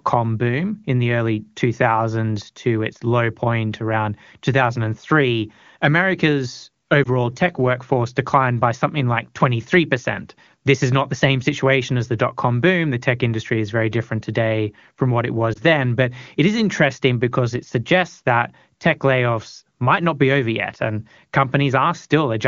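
Lost AMR speech frames at 7.03 to 7.07 s and 15.53 to 15.59 s: each time, a corrupted frame failed its check and the wideband decoder filled the gap from its last good settings at reduced gain, giving a brief dip or warble that fits a single 20 ms frame.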